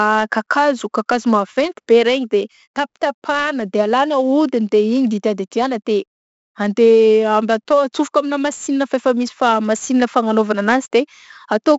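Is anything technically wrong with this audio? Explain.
Yes. Throughout the speech, heavy 4-bit ADPCM compression codes each sample as a coarse step from a prediction, so loud passages carry a gritty, level-following hiss and smeared attacks. Unlike steady tape hiss, it vanishes in pauses. Nothing above 7.7 kHz fits a 16 kHz sample rate at 64 kbps.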